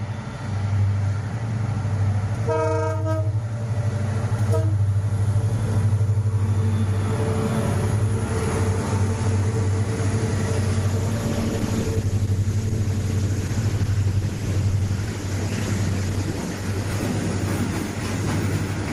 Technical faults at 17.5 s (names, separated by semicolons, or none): call bitrate drop